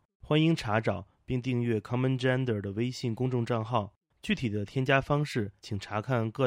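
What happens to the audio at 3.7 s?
A faint metallic shimmer on sibilants, heard throughout: imaging from linear upsampling, straight-line interpolation to 44.1 kHz leaving mirror images above 12 kHz, roughly 40 dB down.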